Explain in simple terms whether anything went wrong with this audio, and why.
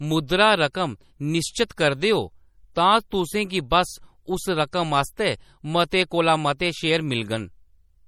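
Yes, something went wrong. The speech sounds watery and swirly throughout. Crisp sounds lose their edge. This is likely MP3 compression squeezing the file too hard.

There is also pre-echo at 1.68 and 4.71 seconds. A brief hiss comes just before a sharp sound, because the codec smears its noise slightly earlier.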